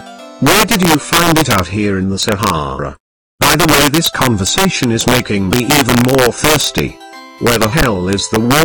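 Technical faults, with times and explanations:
Throughout: integer overflow. Loud peaks break into violent cracks because gain runs about 6 dB too hot, and roughly 2 percent of samples wrap to the opposite sign.
7.81 s: underrun with held sample. The sound freezes flat for 10 ms. The converter held its last value when the buffer ran empty, while roughly 10 ms of live audio was lost.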